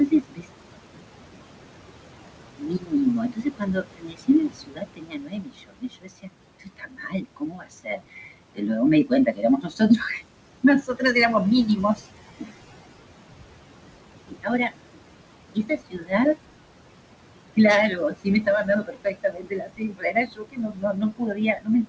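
Noise suppressor artifacts run through the whole clip. The suppressor pulls down whatever it judges to be steady noise by about 21 dB. The room noise, about 11 dB below the speech, drops away in pauses and returns under the talking.

Speech cut by the noise suppressor starts at 0.06 s and lasts to 0.49 s. The suppressor mistakes parts of the speech for noise. It turns them down by as much as about 22 dB. Soft sounds and word endings come out faint or swallowed.

The same cut runs longest from 2.58 s to 11.15 s, dipping about 22 dB. Roughly five seconds of that span are hit. Shorter cuts follow at 11.77 to 12.51 s, about 17 dB, and at 14.27 to 14.74 s, about 21 dB.

It returns at 15.55 to 16.37 s, about 20 dB down. It comes back from 17.56 s to the end, again up to about 22 dB. Quiet syllables in these spans fade under the suppression.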